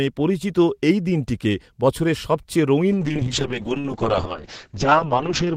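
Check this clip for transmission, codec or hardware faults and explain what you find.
One fault is present, a call bitrate drop starting at 2.92 s, right after "এই দিনটিকে বছরের সবচেয়ে", and lasting to the end. The encoder's rate falls from 32 to 6 kbps, so coding turns coarse and the band narrows from 20 kHz to 8 kHz: muffled, rough, watery speech. Unlike packet loss, nothing drops out; the sound stays continuous but degraded.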